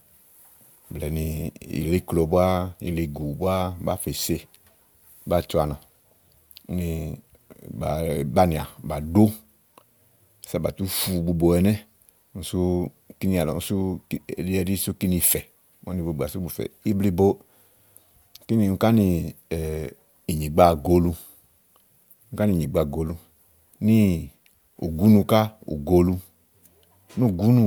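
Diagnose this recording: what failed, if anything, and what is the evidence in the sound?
Nothing failed in this speech recording, and no stage from the wiring through to playback leaves any audible mark. The sound offers no evidence of a fault at any point.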